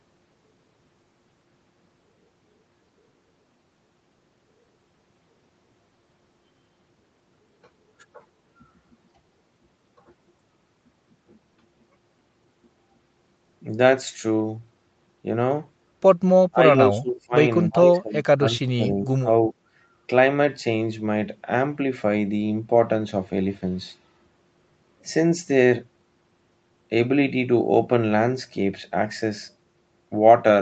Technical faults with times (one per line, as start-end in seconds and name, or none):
16.51-17.34 speech suppressed in double talk
17.67-19.55 speech suppressed in double talk